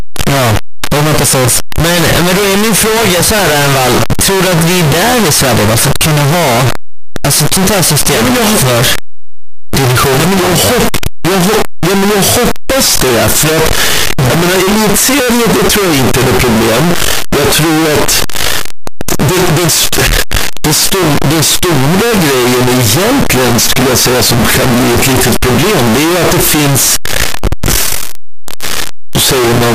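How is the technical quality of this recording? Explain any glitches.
The recording has one serious fault running through the whole of the speech: a signed and unsigned mix-up in the 8-bit samples. From start to finish the sound is a loud, harsh, buzzing distortion, and the quiet stretches are as loud as everything else. The likely cause is a reader treating 8-bit samples with the wrong sign convention. That flips the top bit, so every small swing through zero becomes a leap across the full range. Plain 8-bit quantisation on its own adds only a faint grainy hiss about 50 dB down and never this wall of distortion.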